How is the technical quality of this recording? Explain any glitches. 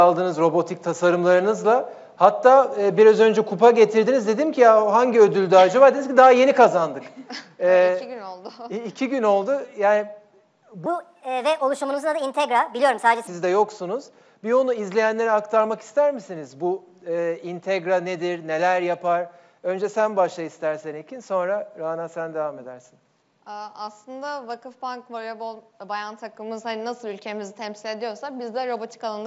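One glitch stands out: a stretch where the sound briefly races ahead and jumps up in pitch.

From 10.86 to 13.27 s, the audio plays about 1.38 times too fast and roughly 5.55 semitones sharp, so everything sounds hurried and squeaky before snapping back. This is a wrong sample rate fault. The samples were played at a higher rate than the one they were captured at, with no conversion, which fits 16 kHz material played at 22 kHz. Speed and pitch therefore rise together by the same ratio.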